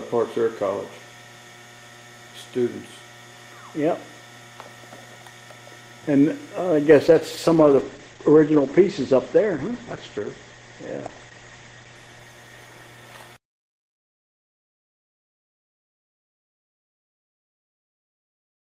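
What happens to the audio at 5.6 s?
Nothing goes wrong at 5.6 s; the audio is intact there.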